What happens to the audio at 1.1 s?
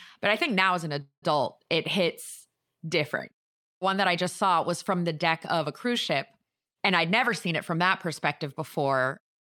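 From 1.01 to 1.24 s there is a call audio freeze. The last sound is stretched into a fading buzz that dies into about 100 ms of silence, and then the speech picks up exactly where it stopped. This is likely a jitter buffer that ran dry while packets were held up in transit. Unlike a packet-loss dropout, nothing is cut out: about 208 ms of gap is inserted, so everything after it arrives that much later.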